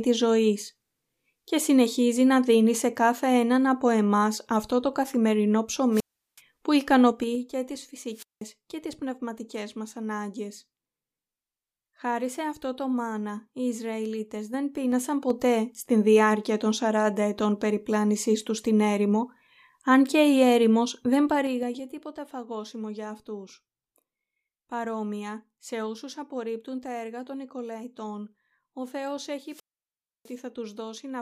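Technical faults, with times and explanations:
5.92–6.40 s, 8.09–8.46 s and 29.42–30.40 s, wireless microphone squelch dropout: The radio link fades. Hiss rises, then the receiver's squelch mutes the output. The silent holes last 0.37 s, 0.19 s and 0.65 s. The speech then returns.
7.06–7.43 s, 14.35–15.56 s and 21.22–21.92 s, zipper noise: The level moves in steps of about 3 dB with no smoothing. Each step clicks. It drops about 10 dB at roughly ten steps a second, rises about 10 dB at about three a second, then drops about 15 dB at about seven a second.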